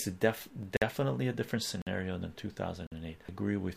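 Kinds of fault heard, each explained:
Damaged data in a compressed stream: Corrupted bytes make the decoder misread frames and lose sync. This produces brief glitches near 0.62 s and 3.29 s.
Gap between chunks: The audio arrives in 1.0 s chunks with silence left at each join. This leaves 50 ms holes at 0.77, 1.82 and 2.87 s.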